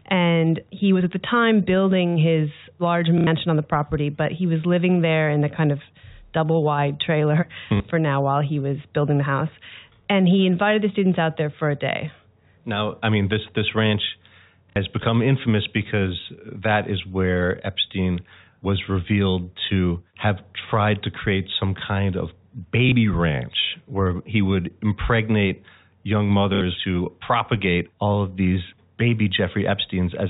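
At 3.18 s speech breaks into a 90 ms robotic stutter: packet loss with last packet repeated, where the receiver fills missing packets by replaying the last good one. Shorter repeats follow at 7.77 s (30 ms, between "double wide trailer hmm" and "for now while he"), 14.7 s (60 ms), 22.89 s (30 ms, after "create some kind of") and 26.55 s (60 ms, before "who propagate all of"). The step sizes fit 30 ms packets, so longer runs buzz near 33 Hz, all heard through the band-limited G.711 telephone coding.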